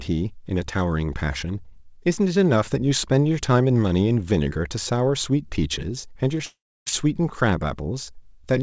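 At 6.38 to 6.41 s a brief smear passes through the speech. This is short concealed packet loss: about 20 ms arrived too late, and the decoder extended the preceding sound to cover it.

From 6.45 to 6.88 s the speech dissolves into a fading buzz, then 290 ms of silence, before resuming later without what was lost. This is likely a long network dropout swallowing about 420 ms of G.722 call audio, which tops out at 8 kHz.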